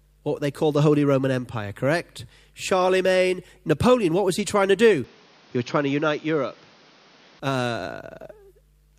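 After "he trying to do", 5.04 to 7.40 s turns dull, with nothing above 6.7 kHz and faint new noise: likely an input switched to a poorer device.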